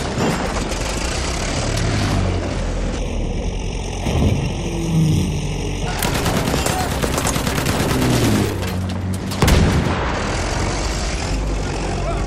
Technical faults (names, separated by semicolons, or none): channel delay (comb filtering)